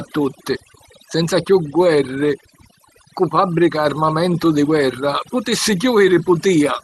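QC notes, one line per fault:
throughout, overdone noise removal: bands near the noise estimate get clamped hard, leaving a lowered background broken into twinkly specks.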